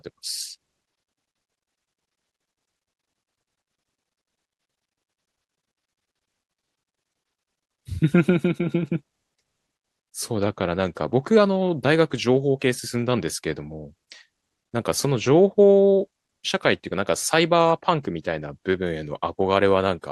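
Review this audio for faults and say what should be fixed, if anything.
No faults found in the speech; nothing to fix.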